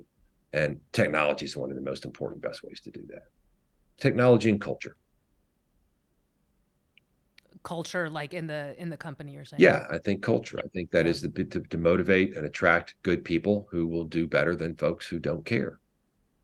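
No technical faults are audible in this speech.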